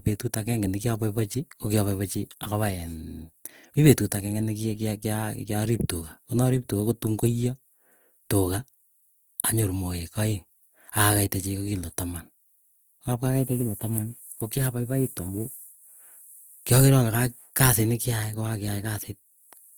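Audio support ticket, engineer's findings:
Opus compression, throughout. Speech plainly degraded: tonal parts rough, grainy and noise-filled rather than swirly. Bandwidth still full, content reaching about 20.2 kHz. Likely an Opus encoder in music (CELT) mode at a low rate, consistent with around 24 kbps: band energies kept, but starved bands are filled with folded or noise content.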